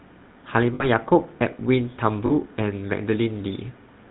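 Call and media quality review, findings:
GSM full-rate codec, whole clip: buzzy, gravelly roughness on speech, plainly audible, with nothing above 4 kHz. Coarse vocal-tract model driven by sparse regular pulses, excitation kept only every third sample, consistent with 13 kbps GSM full rate. Spectrogram: hard ceiling at 4 kHz, smeared pulse-train harmonics below. Waveform: grainy, less defined periodicity.

Lost GSM frames, 0.74–0.85 s: rough metallic ring holding the preceding sound. Decoder reusing last good frame parameters, a gap that fits about three lost 20 ms frames. Spectrogram: frozen horizontal band pattern. Waveform: repeated cycles.

Lost GSM frames, 2.26–2.32 s: shorter metallic hold, same concealment, fits about two lost frames. Spectrogram: brief static bands. Waveform: short repeated cycles.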